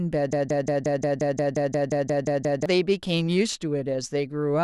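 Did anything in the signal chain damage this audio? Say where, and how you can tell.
Yes. From 0.33 s to 2.66 s the speech is replaced by a broken-record loop: a single 177 ms fragment repeats exactly, back to back, 13 times before normal playback resumes. The speech that should have filled those 2.3 seconds is gone. A stall in the playback or streaming buffer is the likely cause: with no new data arriving, the stage kept re-sending the last block it held until fresh audio returned.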